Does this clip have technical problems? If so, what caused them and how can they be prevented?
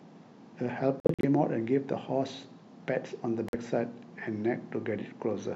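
Yes, a likely Bluetooth dropout: silent holes at 1.0–1.25 s and 3.49–3.55 s (46 ms), after which the speech resumes further on rather than where it stopped. Keep the headphones close to the source and away from wireless interference.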